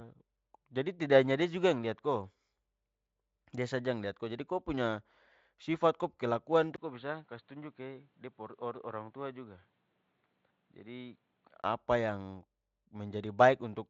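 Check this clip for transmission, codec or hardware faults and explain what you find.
One real problem here. From 6.76 to 11.64 s the input likely switched to a poorer device. After a 20 ms dropout, the top end above 4.5 kHz is gone, so the speech turns dull and boxy. It's also a bit quieter and has a faint new noise underneath. Outside that stretch the Speex coding reaches up to 7.7 kHz, which fits a fairly high bitrate, and leaves at most faint traces.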